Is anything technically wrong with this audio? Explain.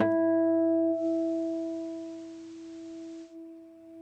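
Yes. From 0.91 s to 3.37 s, a faint hiss, about 30 dB below the signal, rises underneath. This is digital radio blending to analogue: the receiver lost its digital stream and cross-faded over 153 ms to the FM broadcast, then returned.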